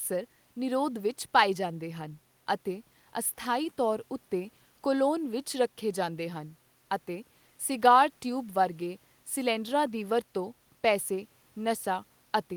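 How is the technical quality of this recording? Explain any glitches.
Nothing here sounds like a glitch at all, so there's really nothing technical to flag in this recording.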